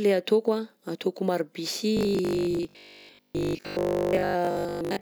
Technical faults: robotic sound from repeated short buffers

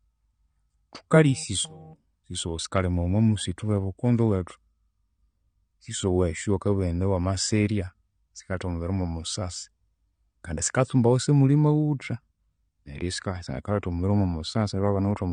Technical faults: AAC compression

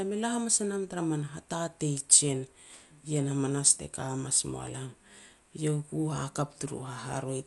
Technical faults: Dolby Digital compression

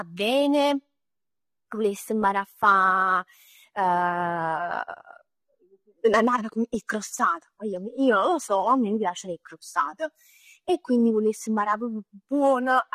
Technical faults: AAC compression

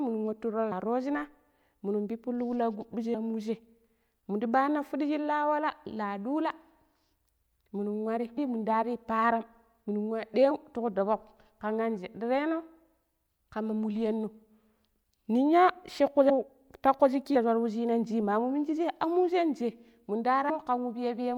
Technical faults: compressed frames skipped

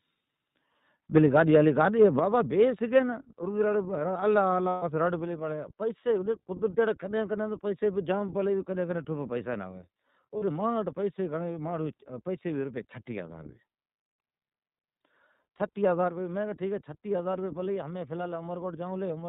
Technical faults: iLBC codec; microphone volume stepped down; lost iLBC frames

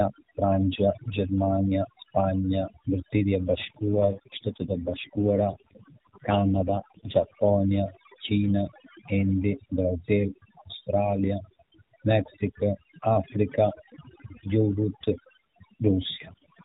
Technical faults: overdone noise removal; AMR rate drop

